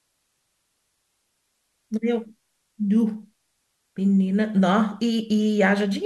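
Speech recording with no technical fault audible anywhere in the signal.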